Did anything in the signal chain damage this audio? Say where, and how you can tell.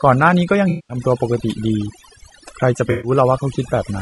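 Yes. At the call-processing stage, overdone noise removal runs through the whole clip. The gaps between phrases drop to near silence with twinkling specks. Unlike codec damage, this comes from bands being gated off near the noise floor.

At the codec stage, the speech is rough and grainy throughout, with noise filling the spaces between harmonics and a dull or synthetic-sounding top band. That points to low-delay AAC compression, likely AAC-ELD at a low rate around 32 kbps.

In the network or decoder stage, AAC frame loss with concealment appears twice, from 0.69 to 0.97 s and from 2.91 to 3.11 s. The first loses 10 frames (200 ms of audio) and the second 6 frames (120 ms). That is a decoder rebuilding the missing audio from its last good spectrum.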